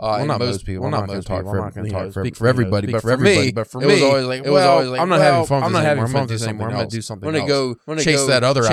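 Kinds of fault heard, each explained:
Doubled audio track: a dry, equally loud second copy of the speech trails about 0.7 s behind throughout, likely from a slower second capture path or a misaligned edit.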